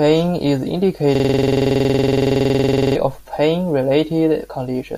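From 1.15 to 2.95 s, a system hang loop replays one 46 ms slice identically, making a steady 21.5 Hz buzz rather than irregular stuttering.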